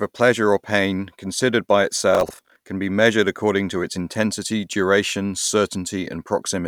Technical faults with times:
2.13-2.56 processor overload crackle

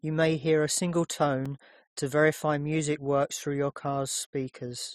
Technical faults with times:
1.45 block of digital silence

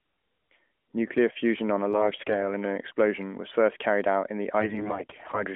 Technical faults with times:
1.91-2.43 AMR bit errors
4.60-5.44 AMR bit errors

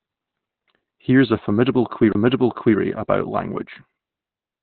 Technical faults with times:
0.00-4.63 Opus compression
3.62-4.63 sudden gain jump

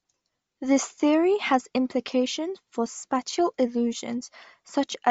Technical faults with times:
0.00-5.11 Bluetooth LC3 compression

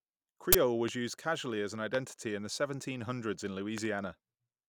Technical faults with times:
0.53-0.55 uninitialised buffer
0.88-0.90 loud pop
1.95-1.97 loud pop
3.78-3.87 loud pop

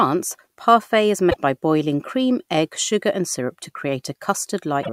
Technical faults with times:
1.27-1.36 damaged data in a compressed stream
4.79-4.89 damaged data in a compressed stream

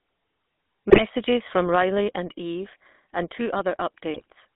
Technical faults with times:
0.00-4.56 GSM full-rate codec
0.90-1.02 GSM bit errors
4.14-4.26 GSM bit errors

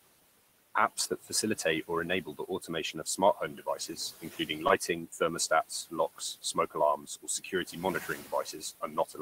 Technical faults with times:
0.00-9.22 noise suppressor artifacts
0.97-1.89 speech cut by the noise suppressor
2.25-9.20 speech cut by the noise suppressor
4.67-4.71 short concealed packet loss

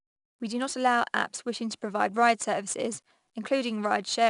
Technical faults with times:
0.00-4.30 4-bit ADPCM compression

